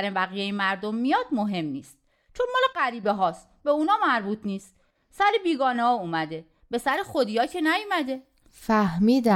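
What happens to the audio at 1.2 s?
Nothing goes wrong at 1.2 s; the speech carries on intact through that moment with no dropout, click or distortion.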